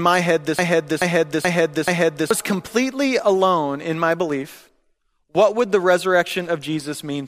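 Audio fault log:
0.59–2.31 s, broken-record loop: right after "my head" the audio grabs a short fragment, about 430 ms long, and plays it four times back to back, exact copies each time, before picking up again at "completely alone in my". Whatever should have been heard in that stretch is simply gone. It's likely the player or stream stalled and kept pushing out the last chunk it had buffered until fresh data arrived.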